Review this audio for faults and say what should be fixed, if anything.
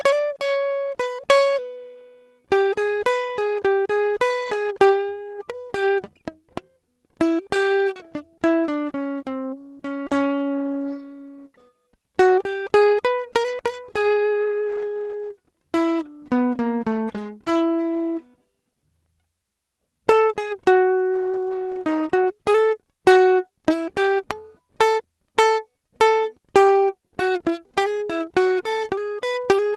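Four lost packets rebuilt from error correction occur in this music, each a 20 ms stretch at 16.91, 16.95, 17.13 and 17.45 s. At each point the decoder played a low-bitrate copy carried in the next packet, so the music continues without a gap but turns briefly grainier and noisier. Unlike plain loss concealment, there is no smeared or repeated tail and no fade. Reducing packet loss on the network path, for example with a steadier connection or less congestion, would prevent it.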